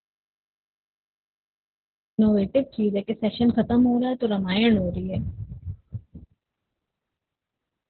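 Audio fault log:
throughout: Opus voice compression. The speech is narrowband with nothing above about 4.3 kHz, so it sounds muffled and boxy; heavy coding damage, consistent with SILK mode at about 8 kbps in 20 ms frames, coarsens the excitation, making it hoarse and slightly robotic.
0.00–2.19 s: audio dropout to silence. The clip opens already in a gap of silence, with no room tone, before the speech cuts in mid-flow at 2.19 s. The likely cause is lost input with the recorder still writing silence.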